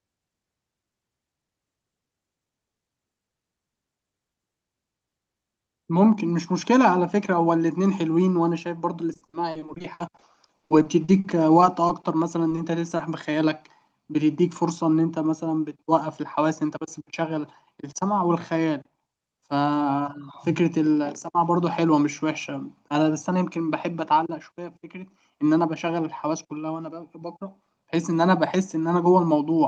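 From 9.13 to 12.05 s the speech shows repeated packet loss with a robotic sound. About two dozen gaps, the longest 60 ms, are each patched by extending the preceding sound, so roughly a quarter of that stretch is synthetic fill. Missing fragments and recycled pitch give the sound a choppy quality.

Three instances of short concealed packet loss follow at 12.49 to 12.53 s, 12.55 to 12.59 s and 12.97 to 13.01 s, each hiding about 20 ms of lost audio. The receiver bridges each hole by continuing the prior waveform and then crossfading back, producing brief smears or wobbles.

From 14.99 to 15.33 s a jitter buffer speed-up trims around 40 ms of excess buffered audio by cutting out pieces of one or a few pitch periods repeatedly. Playback runs at 111% speed with the pitch unchanged, so the passage sounds hurried through the Opus call path.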